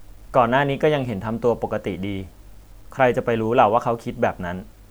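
Low bit depth without dither runs throughout: quiet speech turns gritty, with grain roughly 40 dB below the signal that tracks it, likely from undithered truncation to about 9 bits.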